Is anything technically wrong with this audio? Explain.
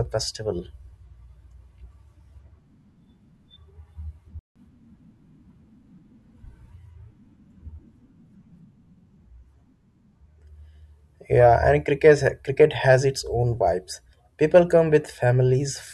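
Yes. At 4.39 s the speech cuts to silence mid-flow for about 0.16 s, then resumes at 4.56 s. This playback stall is likely the player running short of buffered data, or its audio thread being blocked, so output halted until it recovered.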